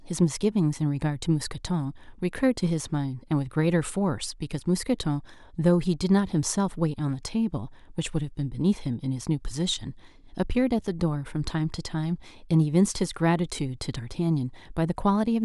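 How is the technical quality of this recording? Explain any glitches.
No glitches to report; the speech recording holds up technically throughout.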